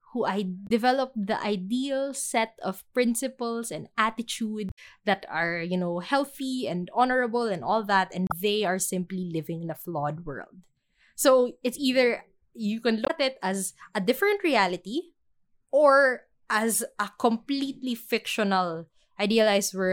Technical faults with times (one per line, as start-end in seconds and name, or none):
0.64-0.70 damaged data in a compressed stream
4.66-4.79 damaged data in a compressed stream
8.27-8.32 damaged data in a compressed stream
13.02-13.11 damaged data in a compressed stream
16.73-16.76 damaged data in a compressed stream